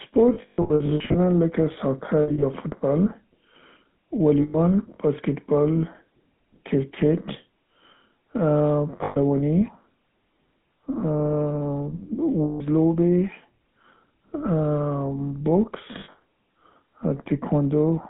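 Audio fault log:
throughout: GSM full-rate codec. The coder models the vocal tract and drives it with a sparse, regularly spaced pulse excitation, which fits a 13 kbit/s GSM full-rate coder, and the line passes only about 150 Hz to 3.6 kHz. The damage is plainly audible: the speech has a buzzy, gravelly roughness from the coarse excitation, and it sounds thin and boxed-in with no low bass and no air above 3.6 kHz.
0.34–1.17 s, 2.22–2.45 s, 4.42–4.56 s, 9.04–9.17 s, 12.44–12.61 s, 16.0–16.16 s: lost GSM frames. Frames went missing, and the decoder filled each gap by reusing the last good frame's settings. This produces a rough, metallic ring where the speech should continue. The first burst is the worst, with about half a second lost in patches across 0.8 s and the longest hold around 150 ms. The later dropouts last between 100 ms and 160 ms.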